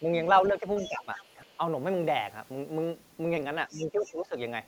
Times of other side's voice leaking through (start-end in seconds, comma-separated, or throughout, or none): 0.76-1.57, 3.69-4.13